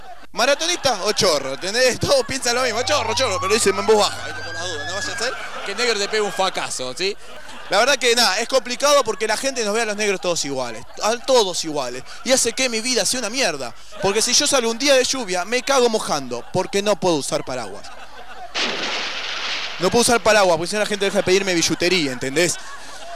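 At 7.37 s and again at 17.36 s the sound skips forward by a few milliseconds, the two sides butting together with no gap. The ten-second spacing points to audio missing between chunks, likely lost as one 10 s chunk closes and the next opens.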